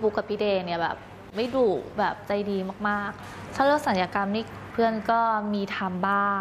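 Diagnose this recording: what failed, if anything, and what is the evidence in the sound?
Nothing failed here as far as I can hear: no stage of the chain leaves a mark, so there's nothing to diagnose.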